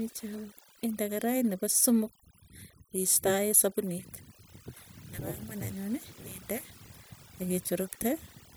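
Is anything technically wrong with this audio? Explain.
Yes. Overdone noise removal runs throughout: an overly aggressive noise reducer zeroes frequency bands near its noise estimate, taking quiet speech detail along, leaving twinkling near-silence.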